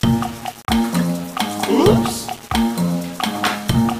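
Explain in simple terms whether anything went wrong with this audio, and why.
Low bit depth without dither runs through the whole clip, from start to end. The sound was likely stored with only about 6 bits and rounded to the nearest step, so the error tracks the sound itself, leaving quiet moments gritty and grainy.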